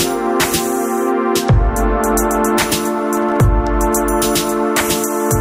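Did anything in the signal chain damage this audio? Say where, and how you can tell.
Yes. Between 3.17 and 3.37 s there is loose connector crackle in the analogue wiring: a fifth-of-a-second burst of irregular scratching as a worn contact makes and breaks, chopping the signal. Its uneven, gritty texture distinguishes it from evenly spaced digital clicks or clean dropouts.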